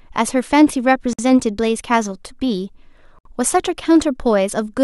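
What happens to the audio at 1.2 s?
A gap at a join of encoded pieces: from 1.13 to 1.19 s, about 55 ms of encoder delay and padding cuts the speech to silence, with smeared edges.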